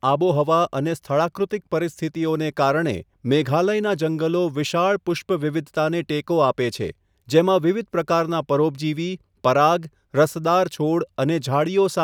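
Speech clip, no technical faults.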